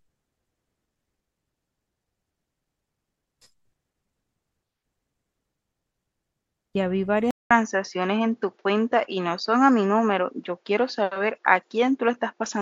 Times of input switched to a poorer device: 7.31-12.62

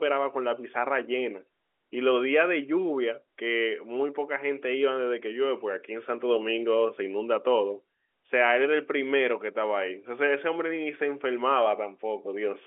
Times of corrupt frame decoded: none

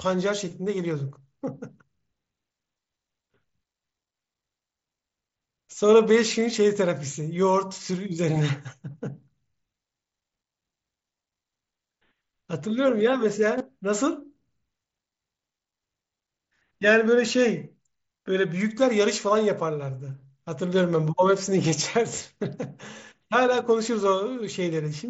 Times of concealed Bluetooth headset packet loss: 13.58-13.60

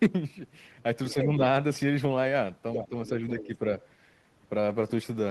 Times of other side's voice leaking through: 2.74-2.88, 3.40-3.46

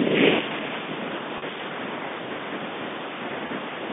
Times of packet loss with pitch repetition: 1.38-1.42, 3.47-3.49

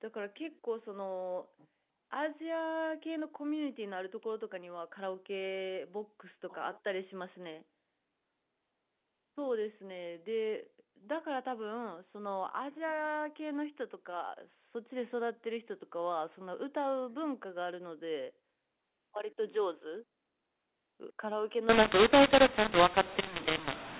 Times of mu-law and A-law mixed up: 21.69-24.00

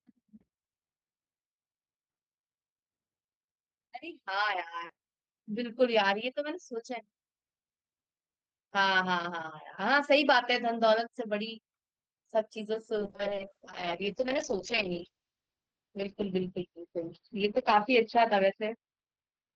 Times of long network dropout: none

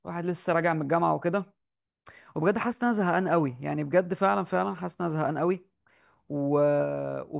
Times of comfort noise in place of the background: none

